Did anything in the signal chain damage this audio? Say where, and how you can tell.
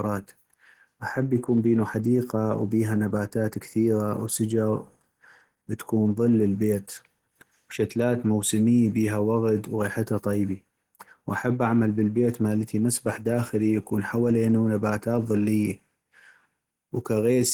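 Yes. Opus compression runs throughout the speech, at the codec stage. The voice sounds muffled, hoarse and grainy, with content reaching about 20.2 kHz. This likely comes from Opus in hybrid mode at a starved bitrate, which fits roughly 16 kbps.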